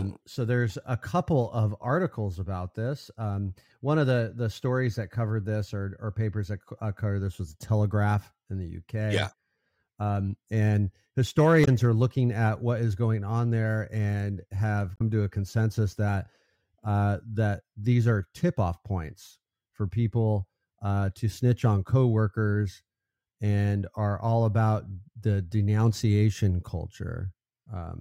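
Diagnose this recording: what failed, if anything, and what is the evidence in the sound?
The failure is at the codec stage: damaged data in a compressed stream. The speech breaks up twice, from 11.61 to 11.68 s (about 70 ms) and from 14.93 to 15.02 s (about 85 ms). At those points corrupted bytes in the encoded stream made the decoder misread or discard frames and lose sync. It then searched for the next valid frame header, which leaves a brief glitch in the speech.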